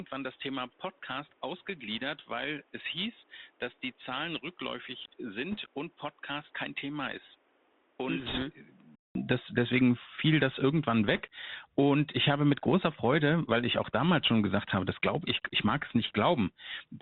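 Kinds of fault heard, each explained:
Bluetooth CVSD headset codec: Throughout, the speech passes through a one-bit delta coder at 64 kHz whose adaptive step cannot keep up with loud, high-pitched sounds. Sibilants turn scratchy over a steady granular hiss, which sets it apart from blockier, frame-based codec damage.
Input switched to a poorer device: For the first 9.15 s the speech is duller, topping out near 3.8 kHz, about 10 dB quieter and with a different noise floor. A 200 ms gap then leads into a clearer sound before "das deswegen fiel das", likely a microphone change.
Bit errors on a Bluetooth voice link: Brief rushing crackle at 5.51 to 5.57 s and 8.19 to 8.43 s, and more faintly at 11.14 to 11.21 s after "deswegen fiel das irgendwann". Flipped one-bit steps give soft, spread noise, never the sharp clicks of dropouts.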